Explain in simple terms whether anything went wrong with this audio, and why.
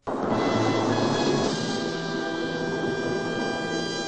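From the very start until 1.48 seconds, the audio has a doubled audio track. Every sound plays twice. A second copy follows about a fifth of a second behind, at about the same loudness. It sounds like a crisp, exact repeat, not a room echo. At 1.48 seconds the copy stops abruptly. The likely cause is the same sound being picked up twice, once through a slower route, and both being mixed together.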